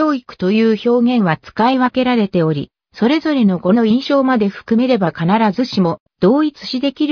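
No technical faults can be heard anywhere in the audio. Nothing in the sound breaks, drops out or distorts at any point.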